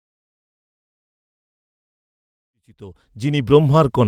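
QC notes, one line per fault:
No faults found in this speech clip.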